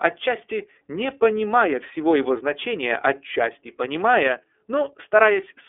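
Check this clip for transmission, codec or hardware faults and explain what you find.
One codec fault runs through the whole speech clip. It is iLBC codec coding. Nothing passes above about 3.7 kHz, and the line band sits near 300 Hz to 3.5 kHz. Each 30 ms frame is coded independently, which fits the 13.33 kbps mode. The damage is plainly audible. The speech sounds clear but slightly rough and synthetic.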